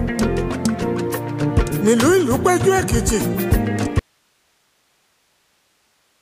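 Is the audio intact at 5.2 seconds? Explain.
No. An audio dropout to a faint residue runs from 3.99 s to the end of the clip, so 5.2 s falls inside it. The wanted signal cuts out abruptly, with no fade, and only hiss remains, roughly 45 dB below the earlier level. That residue is the likely cause's signature: the source was lost while the path after the break stayed live, passing its own background noise instead of silence.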